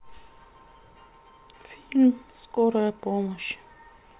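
No technical faults can be heard anywhere in the recording; the speech signal stays continuous and stable throughout.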